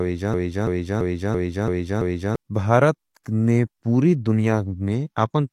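From the start to 2.36 s, a broken-record loop is already under way. A 335 ms fragment repeats six times, exactly, likely from a stalled stream.

At 3.24 to 3.26 s, pre-echo appears. A brief hiss of about 21 ms precedes a sharp attack, which sounds smeared by spread codec noise.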